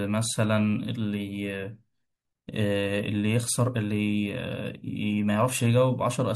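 No technical faults can be heard anywhere in the speech.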